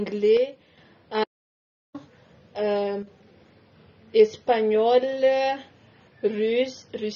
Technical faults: AAC compression; one channel drops out; audio dropout to silence

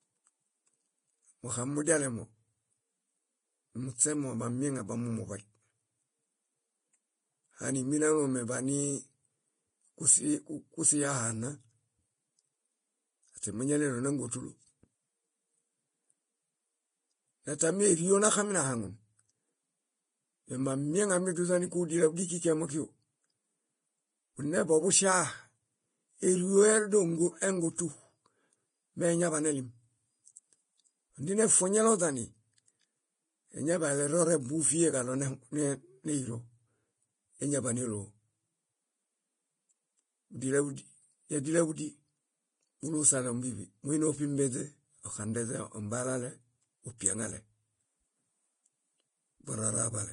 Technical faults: Vorbis compression; pre-echo

